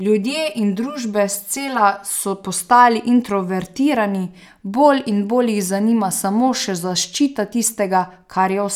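From 0.00 to 2.10 s, just before "so postali introvertirani bolj", channel delay causes comb filtering: one channel lags roughly 5 ms, so the mono sum cancels near 100 Hz and its odd multiples, sounding hollow and phasey.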